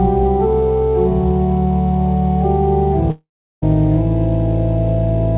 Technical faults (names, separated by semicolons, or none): long network dropout